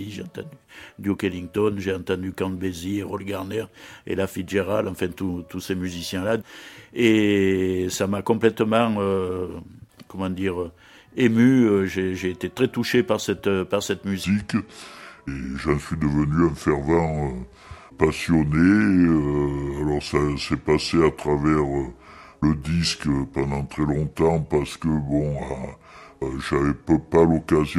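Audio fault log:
14.24 to 27.79 s, section at the wrong speed: the sound drops about five semitones and drags to the end, pitch and tempo sinking together as it runs at 0.739 times its proper speed, likely from this part being played back against the wrong clock.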